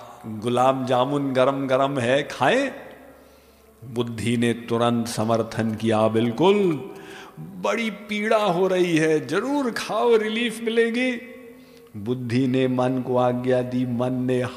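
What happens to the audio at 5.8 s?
GSM signalling bursts run 5.07 to 7.12 s. A nearby 2G phone's radio bursts, rectified by the audio circuit, give galloping 217 Hz buzzes, seen as short blocks of stacked spectrogram lines.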